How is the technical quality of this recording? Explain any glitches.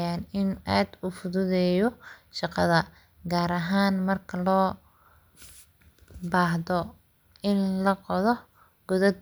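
No technical faults are audible anywhere in this recording.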